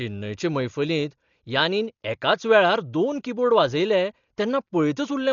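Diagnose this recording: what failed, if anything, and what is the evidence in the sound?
Codec stage: throughout, the speech is dull with nothing above 7 kHz and a rough, fluttering noise around tones, likely heavy Dolby Digital compression at roughly 40 kbps. A plain low-pass filter would not add that noise.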